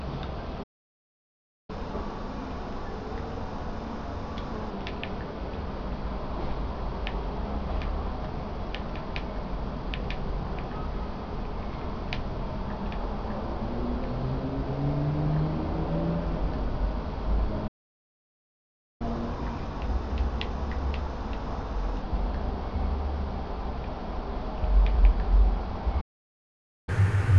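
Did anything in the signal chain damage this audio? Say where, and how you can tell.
Yes, and it's all at the playback end. There are three dead gaps where the sound just stops mid-flow: 0.63 to 1.70 s (about 1.06 s), 17.67 to 19.02 s (about 1.33 s), and 26.00 to 26.89 s (about 0.87 s). That's a playback stall. The likely cause is the player's buffer running dry or its thread getting blocked, so output goes silent until it recovers.

Right after each stall you get catch-up at higher speed, where the player burns through its backlog by resampling. From 1.70 to 4.70 s and 19.02 to 22.02 s it runs at 1.1x, so everything sits about a semitone and a half sharp and slightly rushed before settling back. The last one, from 26.89 s to the end, runs at 2x, close to ten semitones up.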